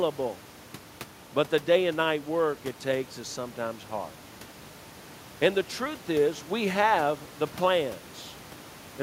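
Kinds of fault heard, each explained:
No kinds of fault are heard in this clip; the only background is room noise sitting about 24 dB below the speech.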